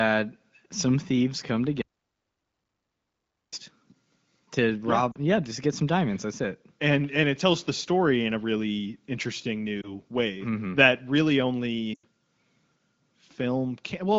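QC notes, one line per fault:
1.82–3.53 s, audio dropout to silence: right after "some thieves come" the sound cuts off mid-flow for 1.7 s and returns abruptly. The waveform goes flat and the spectrogram goes dark, with no room tone. This was likely an input loss while the recorder kept writing silence.
5.11–5.16 s, 9.81–9.96 s and 11.94–12.05 s, lost AMR speech frames: the AMR wideband decoder stretches the last good pitch and spectral shape with fading gain. The first, at 5.11 s, runs 40 ms and drops to near silence; the second, after "in a really interesting", is a brief 20 ms dip or warble. The third, after "that really", runs 100 ms and drops to near silence within two frames. On the spectrogram, harmonics smear flat and dim, and the waveform envelope sags.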